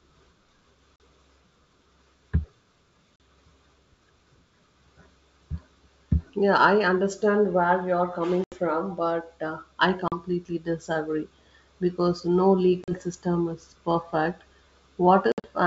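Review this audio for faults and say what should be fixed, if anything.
Packet loss on an ADPCM call: the G.722 stream dropped packets, the gaps were filled with silence, and the decoder's adaptive predictor and step size lost track of the sender's. The result is hard-edged 40 ms holes at 0.96, 3.16, 10.08 and 12.84 s, an 80 ms hole at 8.44 s, and 100 ms of scattered loss at 15.32 to 15.47 s. After each hole the speech resumes with brief, slight distortion. Adding jitter buffering and packet-loss concealment with decoder state recovery would prevent this.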